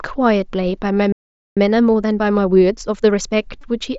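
At 0.39 s a single concealed Bluetooth headset packet loss lasts under 8 ms. The receiver patches the gap with repeated recent waveform, so it is nearly inaudible, unlike a click or dropout.

From 1.12 to 1.57 s a playback stall cuts the speech to silence for about 0.44 s, likely because the player starved or was blocked. Unlike a concealed loss, nothing fills the gap, and the speech resumes where it stopped.

Time-compressed catch-up follows from 1.57 to 3.33 s. The player trims its backlog by cutting out and cross-fading small pieces, so the speech runs 1.25 times fast at unchanged pitch, unlike a speed-up that would raise the pitch.

From 3.61 to 3.64 s a longer concealed Bluetooth headset packet loss of about 22 ms, which fits roughly three consecutive lost packets, becomes audible as a short buzzy held tone with a slight warble as real audio returns.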